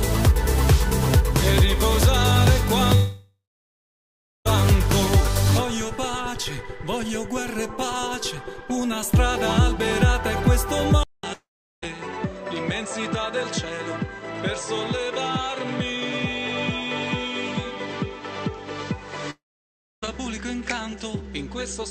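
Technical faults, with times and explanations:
2.95–4.47 s, 11.33–11.84 s, 19.30–20.04 s: long network dropout. Sound stops for 1.5 s, 0.5 s and 0.72 s, each starting with a fading buzz before silence (1.08 s, 0.4 s, 0.64 s). Likely lost packets; the decaying fill distinguishes this from a clean mute.
11.03 s to the end: input switched to a poorer device. After a 200 ms silence, nothing remains above 8.2 kHz, the level drops about 10 dB, and a new noise floor sits about 30 dB below. This is likely a change of microphone; the fresh background noise sets it apart from a simple filter.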